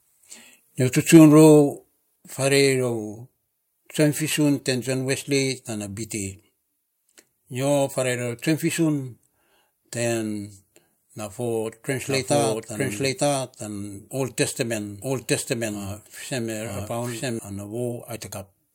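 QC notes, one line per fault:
1.14–1.17 s, microphone overload: Just after "nyo tsi", the loudest peak is driven about 2 dB past full scale and its tops are flattened, with roughly a tenth of the samples in that stretch cut off at the converter's limit. The squared-off crests add a brief harsh crackle. On the waveform the peaks appear as flat plateaus. The spectrogram shows a short broadband smear of added harmonics above the voice band. The likely cause is input gain set too high for this burst.
1.17 s and 2.16 s, microphone volume stepped down: Straight after the clipped peak following "nyo tsi", voice and background together drop by about 2 dB. Roughly a second later they drop again, by about 5 dB. Each change is a clean step rather than a fade. The waveform envelope shows a sudden narrowing at each point, and the spectrogram darkens evenly across all frequencies at both moments. This is likely the call software's automatic gain control lowering the microphone input after finding it too loud.
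12.07–17.39 s, doubled audio track: A second full-band copy of the audio runs about one second behind the original, at about the same level, so each phrase is heard again over the following one. The copy has no decay or room colour, and it starts and stops abruptly at the edges of this span. On the spectrogram every speech pattern repeats, shifted right by about a second. The waveform shows overlapping envelopes. The likely cause is the same signal being captured a second time through a slower path.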